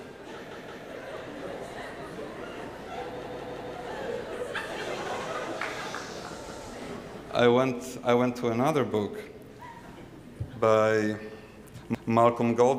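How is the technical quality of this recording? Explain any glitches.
Four stutters mar the recording, all the same repeated buffer fault. At 0.51 to 0.85 s, 3.24 to 3.76 s, 6.49 to 6.66 s and 11.95 to 12.12 s, fresh audio arrived late, so the device replayed its last block of about 171 ms, which fits an 8192-sample buffer. That block sounds twice, three times or four times in a row with hard joins, and the audio then resumes with nothing apparently skipped.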